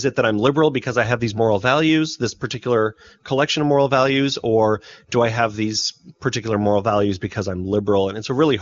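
No audible faults in this speech.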